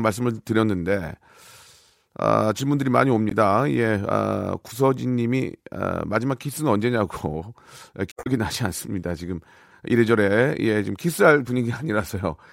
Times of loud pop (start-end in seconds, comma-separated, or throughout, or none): none